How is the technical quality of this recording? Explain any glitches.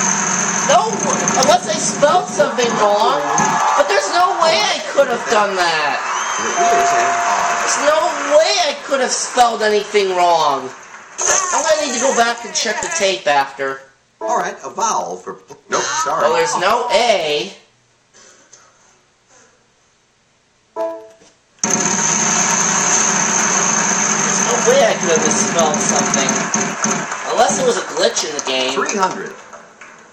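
The recording has a steady glitch running through it. Periodic USB or driver dropouts from 0.11 s to 30.01 s: every 0.1 s a blocked bus or driver loses a sliver of audio to silence, heard as regular ticks.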